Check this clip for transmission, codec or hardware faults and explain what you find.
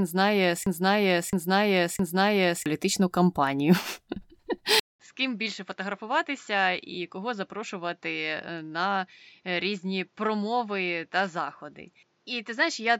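Two faults are audible: a broken-record loop at the start and a switch to a poorer input device partway through.

From 0.0 to 2.66 s the speech is a broken-record loop, already under way when the clip begins. The same 0.66 s fragment plays three times back to back, most likely because the player, encoder or stream stalled and kept resending the last piece it held, so the speech that belonged there is gone. In the waveform, identical blocks repeat at a fixed interval. The spectrogram shows the same pattern copied side by side.

At 4.80 s the input switched to a poorer device, likely another microphone or a headset call profile taking over. There is a silence of about 200 ms at the switch, and then the speech returns roughly 10 dB quieter and duller, with nothing above 7.6 kHz and a new noise floor about 40 dB below the speech. This lasts to the end of the clip. On a spectrogram the top band is cut flat at 7.6 kHz. 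The waveform shows a gap and then a smaller envelope.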